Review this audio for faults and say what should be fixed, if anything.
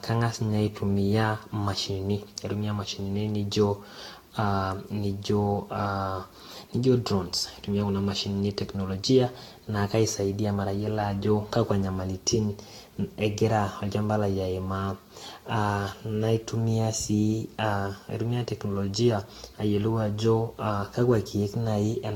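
Generation loss runs through the whole speech recording. Consonant attacks are blurred, and there is a swirling, hollow smear, with nothing above 18.9 kHz. The likely cause is repeated lossy re-encoding, about seven passes of a Vorbis-style codec at a rate that points to around 68 to 70 kbit/s. A single encode at that rate would sound cleaner. Here each pass requantised on a shifted frame grid, so holes and noise stacked up. Keep a lossless master and encode only once, at the final step.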